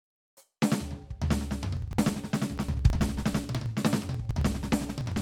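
From 1.77 s to 5.17 s the music picks up a steady rattle of ticks, one every 0.054 s, so roughly eighteen a second. That's periodic USB or driver dropouts: something keeps stalling the USB bus or audio driver on a fixed schedule, and each stall skips around 10 ms of audio outright instead of filling it with silence. The waveform jumps at every splice, which is what makes the click, and because it repeats so evenly it sits on the music as a regular tick.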